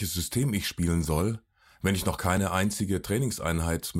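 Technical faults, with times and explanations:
2.37 s, overlap between stream segments: after "soll wenn ich noch", the player trims a few milliseconds at a segment join, so the waveform jumps and you get a tiny skip.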